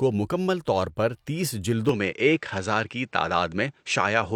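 Right after "مکمل طور پر تیس", at about 1.89 s, the speech suddenly goes duller and stays that way to the end, with nothing above 8.6 kHz. There's no gap and no real level jump, only a faint new noise floor. That's likely the input switched to a poorer device.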